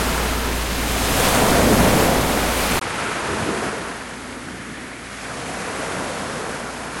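At 2.79 s a 20 ms gap breaks the sound, then it turns duller, drops about 5 dB and gains new background noise roughly 35 dB down: likely an input switched to a poorer device. The spectrogram shows nothing above 11.4 kHz from there onward.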